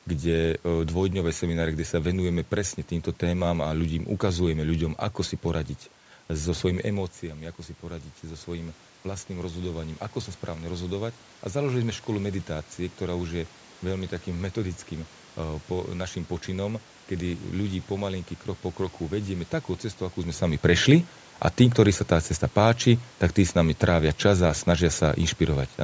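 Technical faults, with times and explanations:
7.21 to 11.74 s, automatic gain rising: Around 7 s the talker moves back and the input falls by about 11 dB. The gain control then raises its gain slowly, by about 6 dB over four and a half seconds. Voice and room noise swell together.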